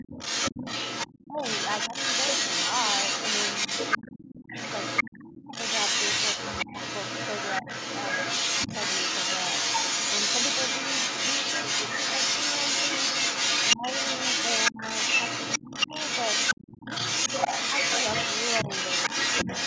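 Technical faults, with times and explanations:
Throughout: the other side's voice leaking through, a second talker sitting roughly 5 dB above the main speech, likely from loudspeaker echo the canceller didn't fully remove.
1.26–1.92 s, 3.98–5.54 s, 6.65–7.67 s, 13.75–16.88 s: speech suppressed in double talk, the voice dips by up to roughly 25 dB in patches (milder, about 10 dB, around 7 s), likely the canceller turning everything down while both sides talk.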